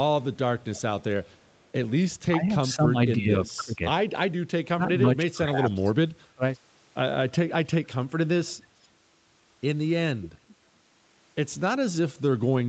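A faint echo leak at 1.47 to 1.65 s, about 40 dB below the speech and delayed about 0.31 s, is likely a far-end echo canceller passing loudspeaker pickup back. From 2.3 to 3.82 s, 4.74 to 5.88 s and 6.35 to 6.42 s the speech dips by up to about 15, 20 and 30 dB, likely speech suppressed in double talk. Echo returns at 8.83 to 8.88 s and more audibly at 10.22 to 10.54 s, about 20 dB down, again delayed about 0.31 s.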